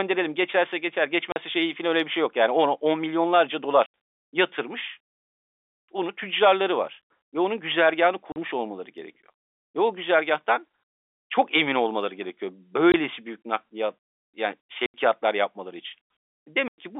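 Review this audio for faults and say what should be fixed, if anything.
Packet loss filled with silence at 1.32 s (40 ms), 3.86 s (80 ms), 8.32 s (40 ms), 12.92 s (20 ms), 14.86 s (80 ms) and 16.68 s (100 ms). Lost packets were replaced by silence, so the speech drops out with abrupt, hard edges. The gap lengths are all multiples of 20 ms, which fits a 20 ms packet size. The G.711 telephone band underneath sounds normal. To prevent this, add a jitter buffer with packet loss concealment, or forward error correction, so that lost packets are interpolated rather than muted.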